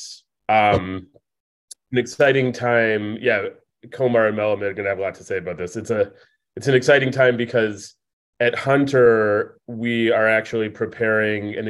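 Nothing stood out as a technical fault on listening.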